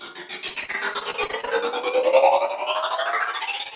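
Repeated packet loss (robotic sound) runs from 0.48 to 1.49 s: about a dozen short dropouts, the longest 42 ms, are each patched by stretching the preceding sound, so roughly a quarter of that stretch is filler. The result is choppy, over a band that stops at 4 kHz.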